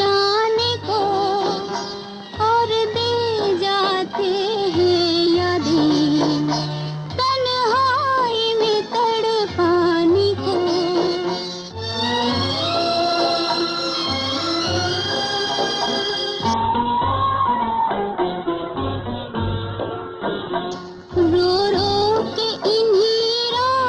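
At 16.54 s a call bitrate drop sets in and lasts to the end. The connection's bandwidth estimate collapses, so the encoder is starved of bits, and the sound fits a fall from about 48 kbps to about 8 kbps. With so few bits the codec quantises coarsely and narrows the band from 20 kHz to 4 kHz. The audio turns muffled and rough, with a watery texture, and it is thinnest for about 3.9 s.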